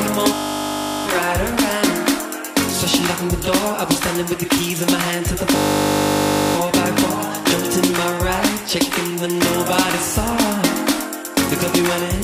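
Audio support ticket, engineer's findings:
System hang loop, 0.34–1.06 s: steady buzz, one 20 ms slice repeated about 36 times at 50 Hz. Probable component: audio driver or host stall while the DMA ring buffer kept replaying.

System hang loop, 5.56–6.56 s: a 20 ms slice, 50 Hz buzz, about 50 repeats. Same mechanism. Fits a ring buffer roughly 20 ms deep. Playback resumes where it stopped, with little or nothing skipped. Waveform shows identical repeating 20 ms blocks. Spectrogram shows harmonic lines spaced 50 Hz apart.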